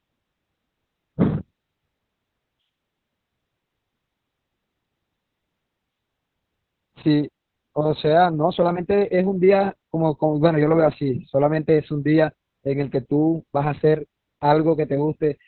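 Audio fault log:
Throughout, Opus voice compression: nothing above 4.2 kHz, muffled, hoarse and a bit robotic, which fits narrowband SILK squeezed to around 6 kbps.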